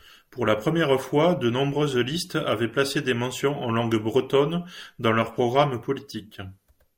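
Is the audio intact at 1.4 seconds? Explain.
Yes, the audio is intact at 1.4 seconds, with no dropout, click or other fault at that moment.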